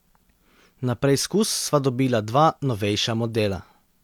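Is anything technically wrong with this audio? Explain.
Yes. At 3.53 s in the speech there is a single sharp tick, broadband and unrelated to the surrounding sound. This is a bit error spike: one flipped bit, likely in memory or on a digital link, throws a single sample off by a power of two before it snaps back.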